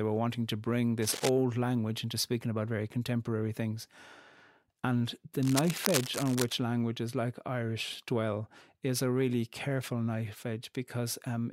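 A worn cable or connector likely shifted, its contact resistance jumping rapidly: cable scratch noise. From 1.02 to 1.29 s, between "were wanting to bring" and "language into speaking about", and again from 5.43 to 6.56 s, ending before "languages like", dense rustling scratches sit only about 5 dB below the speech.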